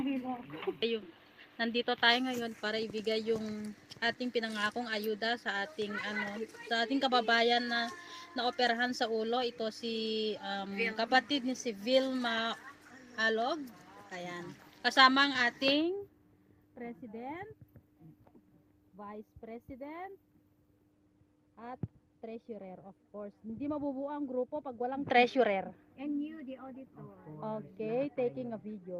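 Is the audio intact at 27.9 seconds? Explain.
Yes, the audio is intact at 27.9 seconds, with no dropout, distortion or other fault audible at that moment.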